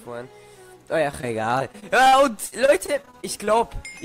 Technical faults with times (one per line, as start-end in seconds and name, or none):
1.11-3.49 repeated packet loss (robotic sound)